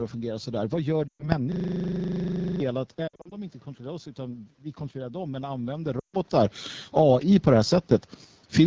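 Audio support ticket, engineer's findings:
AMR wideband (HD Voice) codec, whole clip. Rough, raspy speech consistent with AMR-WB at 8.85 kbit/s, a low rate. Spectrogram shows smeared harmonics below 6.4 kHz and a flat, noise-filled band from 6.4 to 7 kHz. Nothing above 8 kHz, as expected after call microphone processing.

Lost AMR speech frames, 1.08 to 1.33 s. About 120 ms concealed, which fits six 20 ms frames failing checksum. Decoder repeats the last pitch and vocal tract state with falling gain, so the sound drops to near silence within two frames. Waveform shows a decaying tail, with a weak, rough onset on recovery.

Lost AMR speech frames, 3.08 to 3.35 s. About 160 ms lost, scattered across 240 ms, with the longest run 60 ms. This is heard as repeated brief dips and warbles rather than one fade. Spectrogram shows a blurred, stuttering texture with short gaps punched through the harmonics.

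Lost AMR speech frames, 6.00 to 6.14 s. About 140 ms concealed in one run, likely radio bit errors. The sound drops to near silence before speech returns thin and rough. Waveform shows a smooth amplitude decay followed by a ragged restart.

System hang loop, 1.52 to 2.60 s. A 40 ms segment repeats exactly, about 27 times, giving a steady 25 Hz buzz-like stutter. Around a second of real audio is lost. Driver or OS stalled while the ring buffer kept cycling. Spectrogram shows identical vertical stripes at 40 ms spacing.

Automatic gain rising, 2.96 to 7.81 s. AGC raises gain by about 10 dB over several seconds after the input drops by about 11 dB around 3.0 s, where the talker moves back. Speech and room noise swell together. Waveform envelope and noise floor climb in step.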